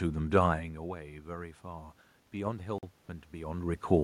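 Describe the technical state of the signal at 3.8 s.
At 3.8 s the signal is near the end of an automatic gain rising episode that runs from 1.26 to 3.86 s. The input level dropped by about 14 dB, possibly with the talker moving around 0.5 s, and the gain control responded by slowly raising its gain about 4 dB. That gain applies to everything the microphone picks up, so the voice and the room noise grow louder together over more than two seconds.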